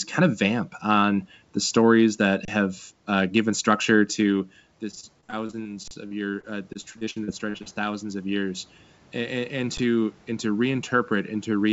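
At 2.45 to 2.48 s, between "on the stories that" and "have uh given structure", an underrun with held sample freezes the output for 30 ms. The waveform shows a flat line. Playback resumes where it paused, so it sounds like a brief, soft stall rather than a click.

From 4.79 s to the end, after "uh given structure to", automatic gain rising follows an input drop of about 14 dB. The control lifts its gain gradually, so voice and room noise swell together, visible as a slowly widening waveform envelope.

Between 4.91 and 7.68 s, repeated packet loss (robotic sound) sets in. A couple of dozen holes, none longer than about 53 ms, are patched by extending the last sound. The speech turns choppy with pieces missing, and the spectrogram shows smeared, repeated slices below the 8 kHz ceiling of the call codec.

Further underruns with held sample occur at 5.88 to 5.91 s (34 ms) and at 9.77 s (10 ms). 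Each appears as a short flat segment in the waveform and is heard as a soft, clickless hiccup.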